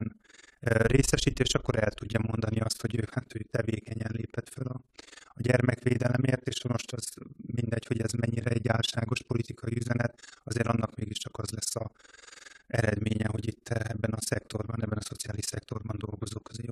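Overlap-add ripple runs through the whole speech recording. The sound was split into windowed frames and rejoined with an overlap that doesn't sum to steady gain. The level dips by about 60 dB, roughly 20 times a second, giving a fast, rough flutter.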